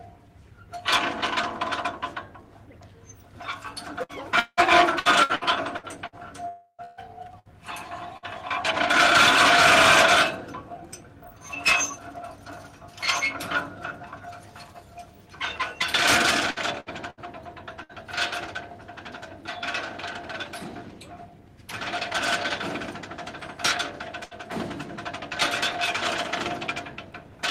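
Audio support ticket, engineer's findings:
Repeated packet loss (robotic sound), 4.03–8.26 s and 16.51–17.92 s: choppy audio with pieces missing, with 10 and 4 concealed gaps (longest 181 ms and 72 ms). Jitter buffer/PLC repeats the last frame, so the spectrogram shows smeared, repeated horizontal bands.

Long network dropout, 6.48–6.81 s: a fading buzz or hiss over 300 ms, ending in about 60 ms of near-silence. The likely cause is a network outage with PLC extrapolating and decaying. The waveform shows a tapering envelope, then a flat line.

Burst of packet loss, 24.25–24.34 s: a brief held, fading sound where about 60 ms is missing. Consecutive lost packets are concealed by PLC. The spectrogram shows a short stretched, dimming segment before the audio resumes.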